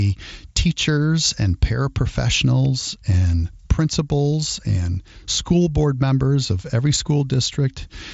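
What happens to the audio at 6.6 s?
Nothing goes wrong at 6.6 s; the speech carries on intact through that moment, passing over the wideband Bluetooth headset link as it does throughout, with nothing above about 7.7 kHz.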